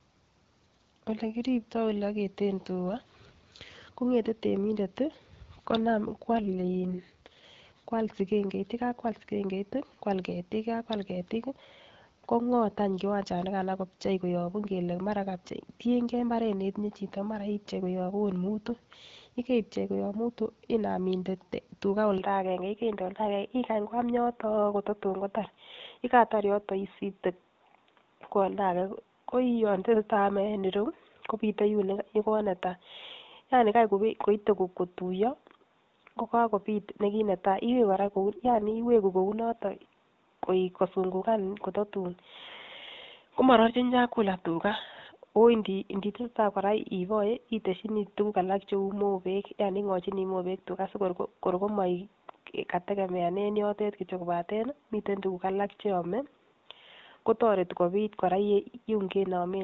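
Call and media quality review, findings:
AMR rate drop, 6.32–7.44 s and 37.90–39.02 s: each lasts about 1.1 s with no gap, and the sound turns rough, buzzy and synthetic. Component: AMR-WB encoder, stepped from 12.65 to 6.6 kbit/s by link adaptation, with bits diverted to error protection. Spectrogram: bandwidth unchanged, harmonics smeared, upper band grainier. Waveform: continuous, no dropout. Cleaner 12.65 kbit/s coding resumes after each.

Input switched to a poorer device, from 22.18 s, after "mutu inam inde tugaa": the sound goes dull and boxy. Likely cause: input moved to a narrower microphone or headset call profile. Spectrogram: ceiling at 3.8 kHz, new noise floor about 55 dB down, no gap or level step.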